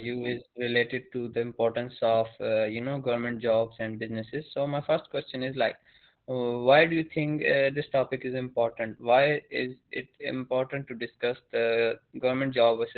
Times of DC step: none

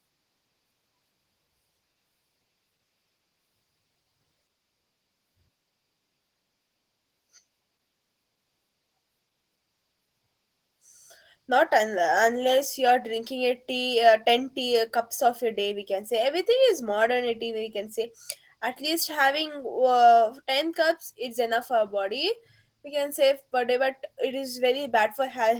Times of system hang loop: none

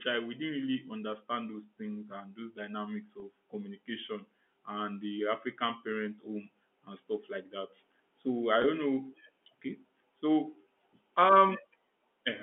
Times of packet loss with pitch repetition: 3.20-3.22, 8.62-8.64

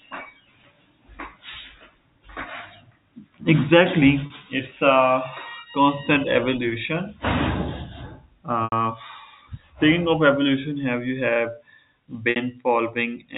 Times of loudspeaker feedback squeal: none

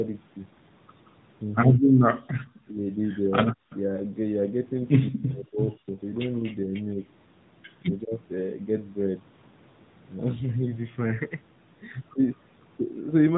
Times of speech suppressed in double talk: 1.75-2.01, 3.53-3.71, 5.01-5.98, 7.82-8.12

